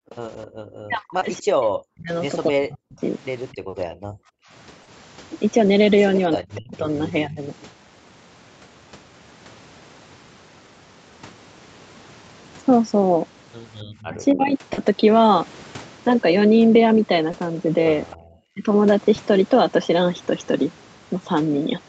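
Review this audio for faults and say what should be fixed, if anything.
Echo leak appears four times: 0.10 to 0.47 s, 3.52 to 3.56 s, 13.95 to 14.08 s and 18.11 to 18.16 s. Each time a faint copy of the speech trails the original by 266 ms. It sits about 25 to 35 dB below the direct speech. The likely cause is a far-end loudspeaker whose echo canceller left some of the returning sound in its microphone signal. Better acoustic isolation or a headset at that end would stop it.

Background gated by the echo canceller pulls the room sound down sharply. This happens from 0.00 to 0.53 s, from 3.56 to 4.51 s, and from 18.16 to 18.26 s. The deepest dips are about 40 dB, and about 34 dB in the last one. The first dip lasts only a brief moment in total. The second lasts about a second. The ambience vanishes and then snaps back when the canceller releases. Gentler suppression or comfort noise during echo handling would prevent it.

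Speech suppressed in double talk makes the talker dip and break up in four places. These are 0.81 to 3.02 s, with roughly 1.5 s affected, 6.36 to 7.41 s, 14.08 to 14.63 s, and 18.54 to 18.66 s. The first two drop by around 40 dB. The later two drop by around 20 dB. The likely cause is an echo canceller that mistook overlapping talk for echo and attenuated the talker along with the echo. A canceller tuned for full-duplex operation would keep both voices.

Short concealed packet loss shows up as brief smears or wobbles at seven points: 1.19 to 1.23 s, 3.69 to 3.75 s, 4.83 to 4.89 s, 6.61 to 6.67 s, 14.73 to 14.79 s, 17.31 to 17.35 s and 19.15 to 19.19 s. Each gap is 20 or 40 ms of missing audio. The decoder filled each one by extending the preceding sound, then blended it back. A more stable network path or a deeper jitter buffer would reduce these.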